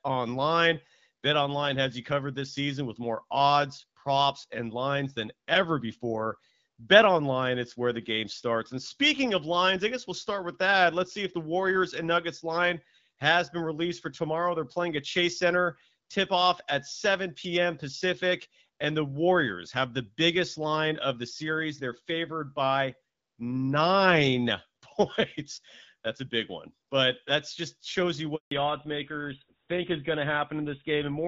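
At 28.35 s there's a handover gap: the call jumps networks, no frames arrive for about 160 ms, and the sound just drops out until 28.51 s. Right after, it falls back to narrowband, so the HD Voice clarity is gone and everything above 4 kHz vanishes, leaving the speech duller and rougher through to the end.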